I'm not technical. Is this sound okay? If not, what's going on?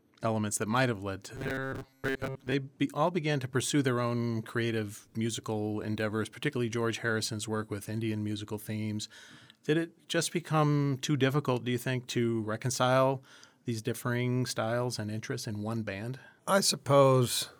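No. From about 1.35 to 2.54 seconds, the speech takes on a robotic sound from repeated short buffers. It becomes a stiff, metallic buzz at about 134 Hz, though it still roughly follows the speech. This likely happens when new audio arrives too slowly. The software then replays a tiny slice, about 7.5 ms long, over and over, and most of the real audio in that stretch gets skipped.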